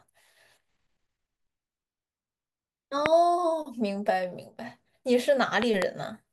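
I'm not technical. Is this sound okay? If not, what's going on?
No. The speech is interrupted by a loud pop at 3.06 to 3.08 s, a single sharp click. From 5.62 to 5.84 s there are two more pops in quick succession. Each one is much louder than the speech around it, and the speech carries on underneath. The likely cause is a sudden electrical jolt entering the signal, such as a plug being moved, a switch, static, or a glitch in the recording device.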